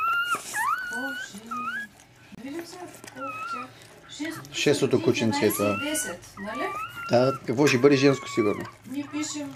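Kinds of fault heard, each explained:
Bluetooth stall: Packets were most likely held up by wireless interference, so the headphones' buffer ran dry and playback paused until resent data arrived. Between 2.35 and 2.39 s the sound drops to silence for about 29 ms before continuing.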